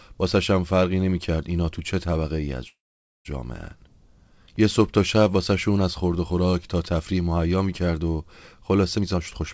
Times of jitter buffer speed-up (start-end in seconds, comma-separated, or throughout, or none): 8.97-9.54